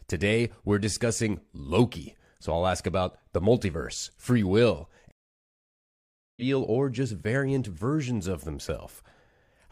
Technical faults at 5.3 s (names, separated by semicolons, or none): stream reconnect